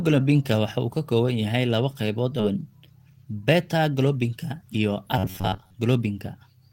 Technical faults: skip ahead; robotic sound from repeated short buffers

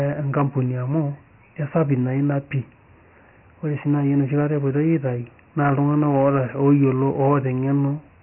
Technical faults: Dialogic VOX ADPCM

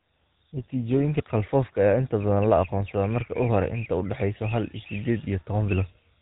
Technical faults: GSM full-rate codec

